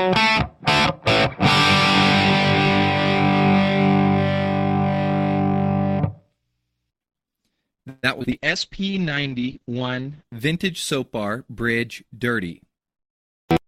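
Packets were likely held up in transit at 7.89 s, so the jitter buffer ran dry and the receiver had to invent audio until they arrived at 8.05 s. This is a call audio freeze. For about 0.14 s the last sound is stretched into a fading buzzy tail. Nothing is lost; playback resumes exactly where it stopped, but the whole stream now sits about 136 ms later than before.

Only a moment later, at 8.19 s, roughly 20 ms of the call failed to reach the decoder in time. This short concealed packet loss was patched by extending the preceding sound for about 12 ms and crossfading back into the real signal. The result is a tiny smear rather than a clean gap.

Straight after, at 8.22 s, a chunk of audio was dropped while later audio was already waiting. That is a skip ahead. Something like 70 ms is simply gone, and the two sides are butted together with only a brief fill. Playback lurches forward, and the delay built up by the freeze shrinks by around 50 ms. 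The join is abrupt, with a missing fragment.

From 8.33 s to 10.31 s the call's bandwidth estimate collapsed and the encoder was forced down hard, which fits a call bitrate drop from about 48 kbps to 8 kbps. At that rate the codec quantises coarsely and cuts everything above 8 kHz, where it had reached 20 kHz. The audio turns muffled and rough and watery, staying at its worst for nearly 1.9 s before quality returns.

Overlapping that, from 8.80 s to 9.29 s, the buffer was short of reserve and stretched the audio by repeating single pitch periods. This jitter buffer slow-down adds about 54 ms over half a second, running the audio at 90 % speed with unchanged pitch. Sounds seem drawn out, layered on top of the low-bitrate dullness.

Later, between 12.18 s and 13.16 s, the opposite happened. The buffer had accumulated more audio than its target, so the receiver trimmed short pitch-period slices again and again to cut latency. 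This jitter buffer speed-up removes something like a tenth of a second and plays the audio at about 109 % speed. Pitch stays the same, but the rhythm is noticeably hurried for that second.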